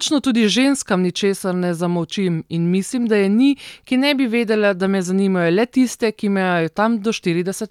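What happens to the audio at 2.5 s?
Nothing goes wrong at 2.5 s; the audio carries straight through that moment without any dropout, click, distortion or other fault.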